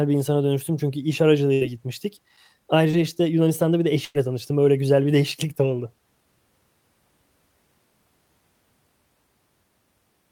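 Right after "insana dönüştüm çünkü iş", at 1.53 to 1.63 s, there's a burst of packet loss. The receiver stretches and fades the last sound for about 74 ms, then jumps ahead past roughly 80 ms of lost speech. At 2.91 to 2.95 s a short concealed packet loss fills a 20 ms hole with a brief smear. Then, after "bir de", a second burst at 4.05 to 4.17 s holds and fades for about 98 ms, dropping around 100 ms of speech.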